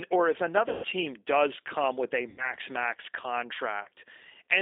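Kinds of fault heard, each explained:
G.729 codec: the speech is rebuilt at 8 kbit/s from a vocal tract filter, pitch predictor and coded pulses, confined to about 300 Hz to 3.7 kHz, with plainly audible roughness throughout. This synthetic graininess sets it apart from simple band-limiting, which only dulls.
VoIP packet loss concealed by the speech codec: around 0.69 to 0.86 s, 2.29 to 2.49 s and 3.83 to 3.88 s, audio was missing for 150, 90 and 30 ms. The decoder stretches the last sound into a fading buzz rather than leaving a silent gap, and weakness lingers afterward.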